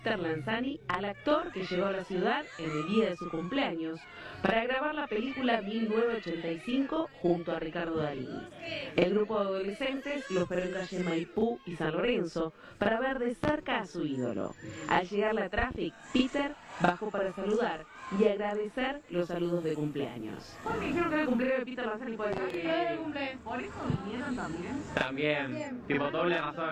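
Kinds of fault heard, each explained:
Channel delay (doubling): throughout, one channel arrives 40 ms behind the other, and once summed to mono the late copy sits at equal level as a distinct doubling or short slap echo trailing every sound, because the buffers feeding the two sides are misaligned.
Loud pop: at 13.44 s, then 15.58 to 15.74 s and 22.33 to 22.54 s, sharp pops land on top of continuing sound, a single strong one first, then pairs. The likely cause is a voltage step from a plug, switch, static or driver glitch.
Digital radio blending to analogue: from 19.09 to 21.53 s the receiver loses its digital stream and cross-fades over about 112 ms to the FM broadcast and later back, bringing faint hiss roughly 40 dB down while the level stays unchanged.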